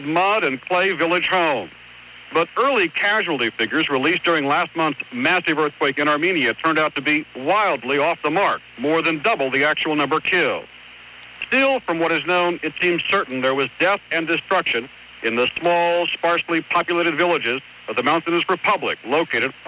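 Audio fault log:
No audible faults detected.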